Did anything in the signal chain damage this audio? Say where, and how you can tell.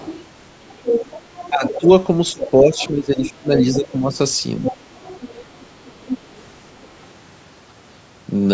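Yes. The damage sits in the call processing stage. There is speech suppressed in double talk at 0.00 to 0.06 s, where the level briefly dips by roughly 10 dB, and again between 1.5 and 4.74 s, where about one and a half seconds in total is pulled down by as much as roughly 15 dB. This is likely the echo canceller failing to tell the near talker from the loudspeaker echo while both sides were active, so it attenuated everything.

The other side's voice is leaking through as a second, fainter voice under the main one. The first stretch runs from 0.01 to 1.8 s at only about 5 dB below the speech. Shorter scraps follow at 2.41 to 2.9 s and 3.57 to 3.76 s, then a longer run from 4.65 to 7.07 s, each about 10 dB down. The likely cause is residual loudspeaker echo that the canceller did not fully remove from the microphone signal. The band-limiting from the call's microphone path, with nothing above 8 kHz, is normal.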